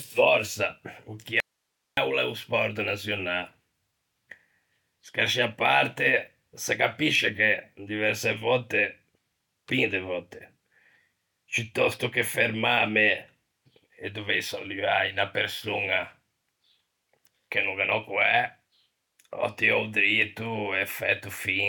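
At 1.40 s the speech cuts out abruptly and returns at 1.97 s, an audio dropout to a faint residue lasting about 0.57 s. The gap is not silent: it holds only a low hiss, roughly 55 dB below the speech level. The edges are hard, with no fade or natural pause shape. This likely points to a momentary loss of the source signal while the recording path downstream stayed active and kept passing its own noise floor.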